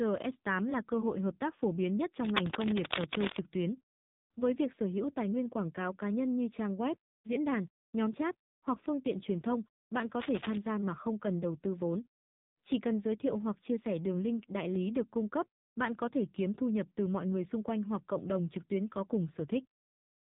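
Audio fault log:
Throughout: AMR narrowband mobile codec. Nothing gets through above 3.8 kHz, and the speech comes out buzzy and synthetic. The codec is rebuilding the voice from a vocal-tract model and a few pulses, and damage this heavy fits a low bitrate of around 6.7 kbps.
2.23–3.40 s and 10.21–10.57 s: cable scratch noise. Dense, uneven scratchy bursts sit over the speech, about as loud as the voice in the first stretch and a bit quieter in the second. This is likely a worn cable or connector being moved so its contact resistance jumps around.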